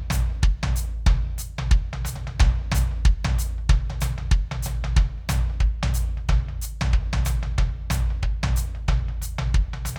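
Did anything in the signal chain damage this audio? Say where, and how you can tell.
No, nothing in the chain audibly damaged this music; the signal holds steady throughout, with no interruptions, level jumps or added artefacts at any point.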